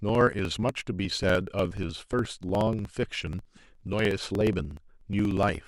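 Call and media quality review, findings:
Periodic USB or driver dropouts, 0.09 to 5.61 s. Regular ticks through the speech every 60 ms, about 17 per second, around a hundred in all. A few milliseconds of audio is skipped each time, not muted. Probable component: USB bus or audio driver, blocked by a recurring background task. Spectrogram: evenly spaced thin vertical broadband lines. Waveform: abrupt discontinuities at matching intervals.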